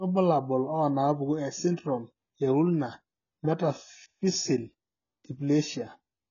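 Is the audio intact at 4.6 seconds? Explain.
No. At 4.6 seconds the speech carries AAC compression damage, as it does through the whole clip. The codec has coarsely quantised its frequency lines, so the speech sounds dull and smeared, with a warbling, fizzy edge on sibilants. Nothing is left above about 7 kHz. The heavy damage likely comes from AAC-LC at a low bitrate, around 16 kbps. A spectrogram shows a hard ceiling near 7 kHz.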